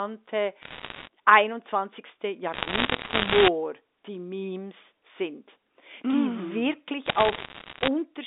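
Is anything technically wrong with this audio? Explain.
Yes. Bit errors on a digital phone line occur at 0.62–1.08, 2.54–3.48 and 7.06–7.88 s. Flipped bits corrupt single samples, so sharp ticks crackle over the speech, densest in the middle stretch.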